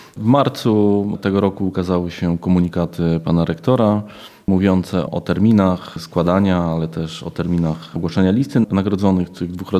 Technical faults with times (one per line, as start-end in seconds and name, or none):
none